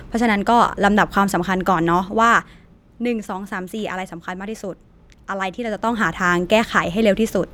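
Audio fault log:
2.01–2.82 s and 5.63–6.10 s, zipper noise: The level drops by roughly 10 dB in the first stretch and comes back up by about the same amount in the second, but each move happens in jumps of about 2 dB with no smoothing between them. Every jump puts a small click into the speech, about seven a second on the way down and about ten a second on the way up, so you hear a ticking, zippy texture riding on the voice while the level moves.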